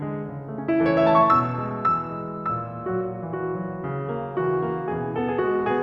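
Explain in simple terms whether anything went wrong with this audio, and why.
Nothing went wrong here: the music carries on steadily the whole way, with no sudden breaks, jumps or odd noises to point to.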